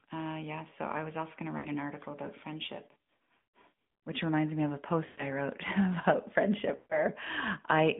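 Throughout, the AMR narrowband mobile codec confines the speech to about 150 Hz to 3.6 kHz and leaves it buzzy and synthetic, which fits AMR-NB's 10.2 kbps mode. A spectrogram shows nothing above that band.

Lost AMR speech frames follow. At 1.58 s, after "was also going to" and before "an article about friendship", the decoder repeats the last good frame for about 60 ms. It does so again for about 160 ms at 3.38 s, after "an article about friendship" and before "which reminds me of". Two more follow: about 120 ms at 5.06 s after "reminds me of a", and about 140 ms at 6.76 s. Each sounds drawn out and fades, visible as smeared, decaying harmonics.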